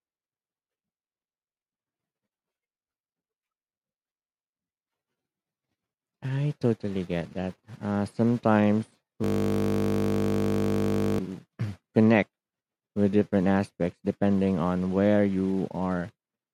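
Speech, interrupted from 9.24 to 11.19 s by a steady, flat buzz where the speech freezes. This is a system hang loop: the computer stalled while the audio hardware kept replaying the same 20 ms buffer nearly a hundred times, producing a 50 Hz drone.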